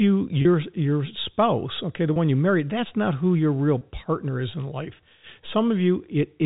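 At 0.42 s, just before "your spouse okay the", then 2.13 s before "you married that's not", and 3.78 s before "partner is in life", there's packet loss with pitch repetition: a 30 ms gap, which fits a single lost packet, bridged by repeating the last pitch period. Each one comes across as a brief buzzy hold in the speech, over the band-limited G.711 telephone sound.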